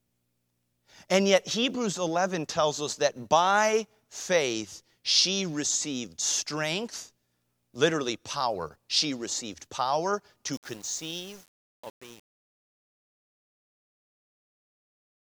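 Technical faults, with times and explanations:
10.53–15.24 s, truncation distortion on a fade: after "received power" the fade-out, starting around 10.5 s, turns gritty, which fits an undithered gain stage keeping about 7 bits. The waveform shows square staircase steps, and the spectrogram shows broadband hash in the quiet tail.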